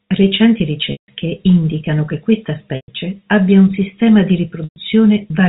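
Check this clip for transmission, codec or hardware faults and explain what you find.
Three gaps show packet loss with pitch repetition, on a line whose G.711 telephone coding holds everything below 4 kHz without audible harm.

Packet loss with pitch repetition: from 0.92 to 1.08 s (160 ms, before "indicano che questa"), 2.76 to 2.88 s (120 ms, before "abbia un sistema di"), and 4.64 to 4.76 s (120 ms, after "abbia un sistema di"). With packets missing, the receiver looped the last pitch cycle and faded it out. Each gap becomes a brief buzzy hold that sinks toward silence before the speech cross-fades back.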